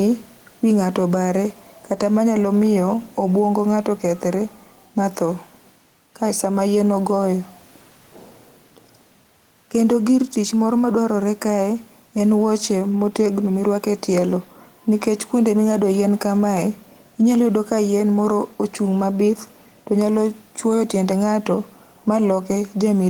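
A speech recording with gain pumping from start to finish, a gain swing of roughly 5 dB, while loud and quiet passages sit squashed close together in level. The likely cause is microphone gain set far too high, with a fast limiter or compressor clamping down on each loud syllable and releasing in the gaps. The room noise sits some 41 dB under the speech.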